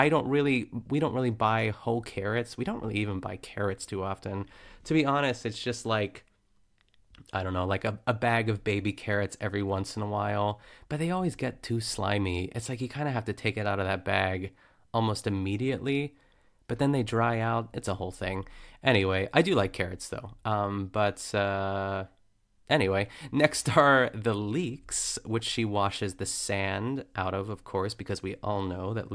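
Speech recording; no technical faults can be heard.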